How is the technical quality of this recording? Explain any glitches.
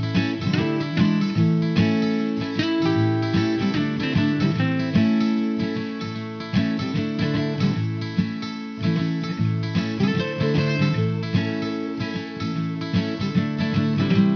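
The recording has one fault, aliasing, present for the whole clip. The sample rate appears to have been cut sharply, to around 11 kHz, with no filter first removing content above the new limit of 5.5 kHz. Everything higher folds back below that edge onto unrelated frequencies, sitting roughly 25 dB under the main signal. The result is a gritty, metallic haze over bright sounds and a spectrum that runs right up to 5.5 kHz instead of rolling off.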